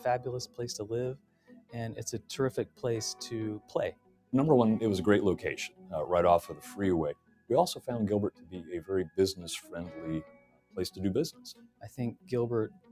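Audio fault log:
throughout: noise suppressor applied to music or sounds. A speech-oriented suppressor stays active and treats sustained tones, ambience and reverb as noise. Its gain swings by around 20 dB, so onsets pass while held parts sink, giving audible pumping and thinning.
1.15–1.75 s, 2.66–2.83 s, 3.59–4.33 s, 5.69–5.93 s, 7.14–7.88 s, 8.31–10.77 s, 11.32–12.32 s, 12.69 s to the end: sound cut by the noise suppressor. Sustained or decaying material is classed as noise and pulled down by about 15 to 18 dB at its deepest. Tails are truncated, and level dips until the next attack.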